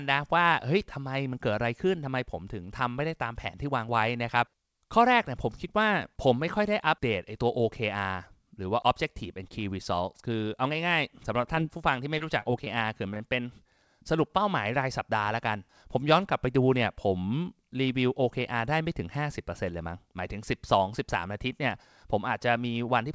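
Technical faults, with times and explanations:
11.42–13.22 s, scattered short gaps: this stretch carries brief ticks, slight smears and small hiccups. About ten tiny holes, the longest around 20 ms, were patched by extending the preceding sound. Roughly 150 ms in all was filled, about 7% of the span. About 80 ms of audio is lost and 6 ms added, a sign of lost or late packets concealed by the receiver, heard against the 8 kHz ceiling of a G.722-style call path.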